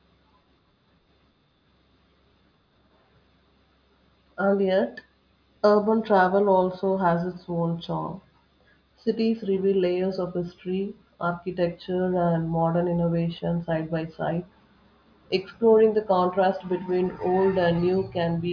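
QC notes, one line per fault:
No faults found.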